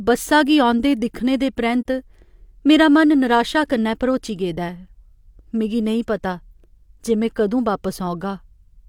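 A speech recording with one brief, soft-edged dropout from 1.81 to 1.86 s, where the sound fades out and back in rather than cutting off sharply. This is AAC frame loss with muting. The decoder zeroed the missing spectrum, and the overlapping windows smoothed the edges. The gap of about 43 ms fits a single lost frame.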